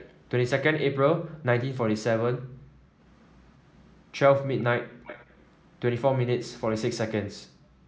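Echo leak appears from 0.0 to 0.3 s, 3.07 to 4.14 s, 4.59 to 4.64 s and 5.04 to 5.8 s. A faint, delayed copy of the speech trails well below it. The lag is 205 ms at first, then 280 ms. A loudspeaker's echo canceller likely let it through.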